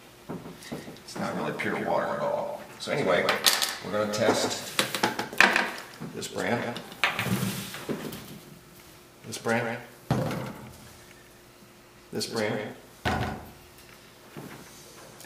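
A doubled audio track runs throughout: one quieter copy trails roughly 150 ms behind, unlike an echo, with no decay or room colour, likely from a second capture path.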